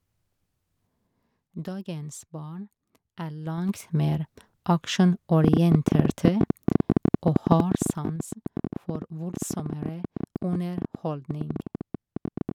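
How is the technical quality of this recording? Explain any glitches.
The recording has audible faults: two stretches of zipper noise during level changes, and a long train of clicks running through the second half.

Zipper noise appears at 3.41 to 3.93 s, where the level rises about 15 dB, and at 7.51 to 8.19 s, where it falls about 10 dB. Each change moves in unsmoothed 3 dB jumps, about ten per second in the first and five per second in the second. Every jump leaves a small click, so the level change comes across as a zipping texture.

A train of clicks starts at 5.44 s and continues to 12.52 s. It is roughly a hundred similar pulses at about 13 per second, unevenly spaced, with peaks around 20 dB above the speech. It ticks over both speech and pauses, most likely from electrical interference or a faulty connection or power supply.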